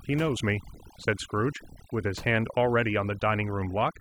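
Overdone noise removal runs through the whole clip, from the first second to the last. A noise reduction stage has been set far too aggressively, pulling individual frequency bands down or cutting them entirely wherever they sit close to its noise estimate. Low-level parts of the speech fall below that threshold and are removed along with the noise. The gaps collapse to near silence dotted with twinkling specks.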